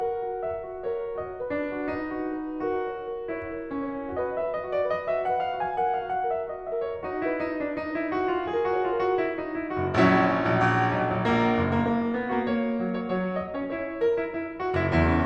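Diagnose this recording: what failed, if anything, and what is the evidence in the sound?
Nothing in this music recording points to a failure at any stage of the chain. No stage between capture and playback leaves an audible mark that would call for a diagnosis.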